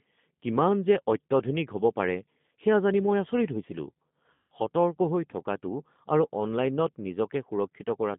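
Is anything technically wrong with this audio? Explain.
Yes. There is G.729 codec coding throughout, and at 4.34 to 4.47 s there is VoIP packet loss concealed by the speech codec.

G.729 codec, for the whole clip: the speech is rebuilt at 8 kbit/s from a vocal tract filter, a pitch predictor and a few pulses in each sub-frame, inside a 150 Hz to 3.6 kHz band. The damage is plainly audible as dull, rough and slightly synthetic speech with no high end.

VoIP packet loss concealed by the speech codec, 4.34 to 4.47 s: about 160 ms of audio went missing, which fits eight 20 ms packets. The decoder filled the gap by extending its last pitch and filter at falling gain, so the speech smears into a fading buzzy tone or coloured noise and recovers weakly.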